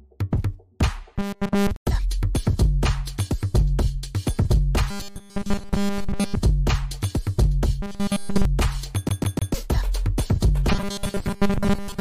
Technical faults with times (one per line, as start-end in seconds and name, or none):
1.16-1.71 robotic sound from repeated short buffers
4.90-6.36 robotic sound from repeated short buffers
7.82-8.45 robotic sound from repeated short buffers
9.09-9.54 CD stuck on one turn
10.72-12.01 robotic sound from repeated short buffers